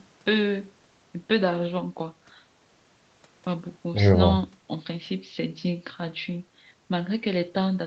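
No technical faults can be heard in this speech.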